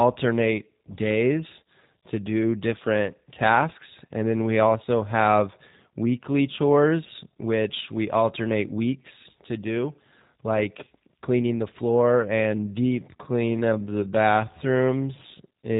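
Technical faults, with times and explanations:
Throughout, G.729 codec: the speech was squeezed through a low-rate VoIP codec, consistent with 8 kbit/s, that rebuilds each 10 ms frame from a vocal tract filter, pitch predictor and sparse pulses. Nothing above 4 kHz survives, leaving the voice plainly rough and synthetic.
12.42–15.79 s, time-stretched section: this final stretch was likely processed by time-stretching software that slowed it to about 0.61 times its original speed, repeating short pieces to hold the pitch. The pace drops abruptly while pitch stays put, and the speech drags.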